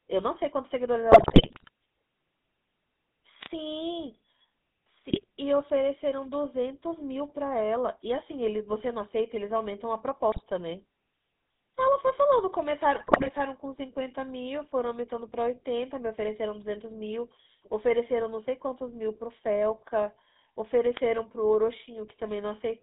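From the first moment to the last, the speech carries the GSM full-rate codec's character: a buzzy, gravelly roughness, consistent with 13 kbps full-rate coding. The vocal-tract model is fed a coarse pulse excitation, so the fine harmonic detail is lost. The line band runs from 150 Hz to 3.7 kHz. On a spectrogram nothing appears above that ceiling, and the harmonics look smeared and grainy rather than as clean parallel lines.

GSM bit errors break in at 1.12 to 1.69 s, 5.10 to 5.24 s, 10.32 to 10.43 s and 12.94 to 13.29 s. Corrupted filter, pitch and gain values reach the decoder, so frames come out with the wrong spectral shape or a sudden jump in level. The sound turns to squawks, pops and gargling. The waveform shows abrupt amplitude spikes, and the spectrogram shows blocky, misplaced energy patches frame by frame. The longest of these runs is the first.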